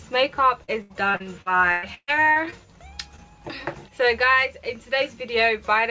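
From 0.64 to 2.54 s there is repeated packet loss, giving a robotic sound: around a dozen holes, the longest 130 ms, are patched by stretching the preceding sound, so about a quarter of the stretch is synthetic. It sounds choppy and robotic. On a spectrogram, frozen, smeared stripes repeat between abrupt vertical seams.

At 3.16 to 3.20 s a short concealed packet loss replaces roughly 20 ms with a continuation of the prior sound, then crossfades back. It is heard as a brief smear or wobble. Throughout, the spectrogram shows nothing above 8 kHz, which fits a wideband call codec.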